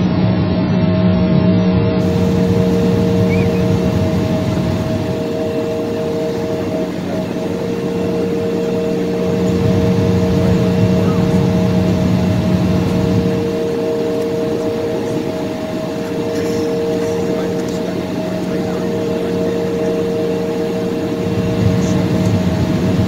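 For the first 2.0 s the audio has nothing above about 5.9 kHz and carries stronger codec artefacts. That is an adaptive stream starting at a low bitrate: the player began on a cheap version to start quickly. The sound points to something like 12 kbit/s AAC before a jump to roughly 96 kbit/s at 2.0 s. Unlike a dropout or glitch, the switch leaves no gap, only a sudden brightening.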